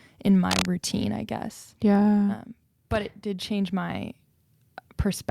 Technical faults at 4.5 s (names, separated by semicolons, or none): none